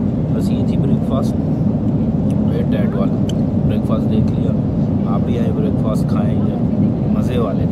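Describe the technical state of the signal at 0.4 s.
The signal at 0.4 s is intact, with no audible fault at that moment.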